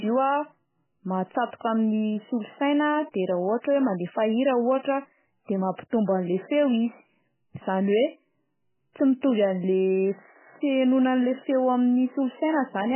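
MP3 compression, heavy and present throughout the speech, is the likely cause of the damage heard from start to finish. Nothing survives above 3 kHz, so the treble is sliced off flat and sibilants lose their edge. The encoder is starved of bits, which fits a rate around 8 kbps, so it zeroes weak frequency lines that then flicker in and out between frames, giving a watery, swirling texture with chirpy artefacts and smeared consonant attacks.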